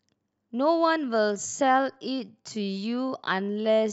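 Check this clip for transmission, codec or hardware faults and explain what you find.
One fault is present. From 1.0 s to the end, a time-stretched section plays at about 0.65x speed, likely from software stretching audio to fit a length by repeating short pieces. Speech drags with unchanged pitch; a spectrogram shows horizontally elongated, blurred harmonics.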